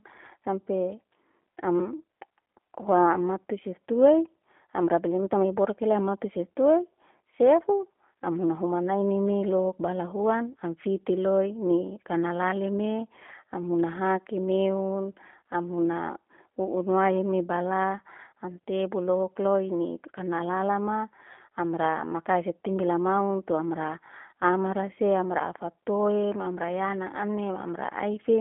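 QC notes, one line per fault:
Throughout, G.729 codec: the speech is rebuilt from a vocal-tract model plus sparse pulses, so it sounds plainly rough and synthetic, consistent with 8 kbit/s. The spectrogram shows a 200 Hz to 3.4 kHz band, empty above 3.5 kHz, with grainy, smeared harmonics.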